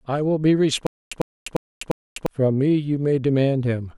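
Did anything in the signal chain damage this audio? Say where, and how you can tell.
Yes. From 0.87 to 2.26 s the speech breaks into a stutter with silent gaps: one 100 ms fragment repeats four times, each followed by about 250 ms of digital silence, a steady 350 ms cycle. A stalled playback buffer likely replayed its last fragment at each retry, losing the speech in between.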